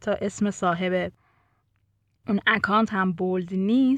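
A short stretch of speech, and nothing technically wrong turns up anywhere in it.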